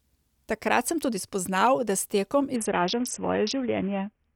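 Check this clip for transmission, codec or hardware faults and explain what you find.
From 2.56 s to the end of the speech, a Bluetooth SBC bit pool drop sets in: the treble turns dull and gritty noise rises, which fits the bit pool falling from about 31 to 5, near 50 kbps. The top sub-bands get almost no bits and the rest are coarsely quantised. Unlike a plain low-pass filter, the dullness arrives together with added grit.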